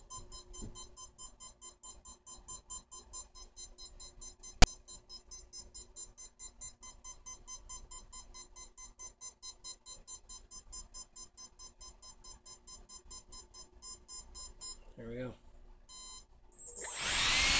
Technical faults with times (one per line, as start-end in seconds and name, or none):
4.62 file tags played as audio